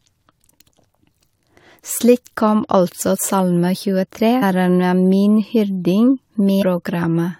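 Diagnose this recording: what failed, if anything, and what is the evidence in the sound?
Codec stage: damaged data in a compressed stream. Brief disruptions at 4.42 s and 6.61–6.63 s. Corrupt frames made the decoder misread them and resync.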